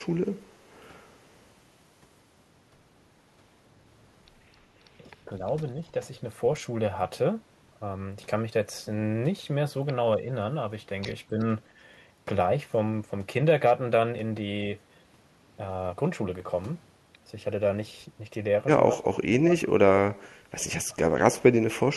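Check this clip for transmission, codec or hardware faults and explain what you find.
The speech dips five times, at 4.99–5.41 s, 11.3–11.38 s, 18.95–20.01 s, 20.86–21.03 s and 21.32–21.42 s. The dips range from a slight sag near 11.3 s to a near-dropout of about 35 dB across the 19–20 s stretch. This is likely speech suppressed in double talk: an echo canceller mistook both sides talking at once for echo and turned the talker down.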